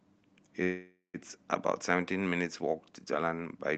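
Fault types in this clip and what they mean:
Call audio freeze: packets were likely held up in transit until the jitter buffer ran empty, so from 0.63 to 1.17 s the last sound is stretched into a fading buzz, including 140 ms of silence, then speech resumes intact, 505 ms late.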